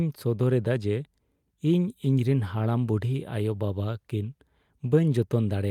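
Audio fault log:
No technical faults are present in this speech recording.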